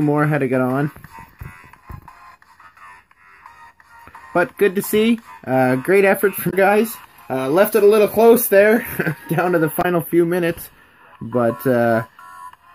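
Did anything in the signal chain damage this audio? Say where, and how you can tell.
Yes: damaged data in a compressed stream, at 6.47–6.54 s and 9.78–9.85 s, each a 70 ms disruption. This is a codec or storage fault: corrupted bytes made the decoder misread or reject frames there, lose sync and search for the next valid frame header.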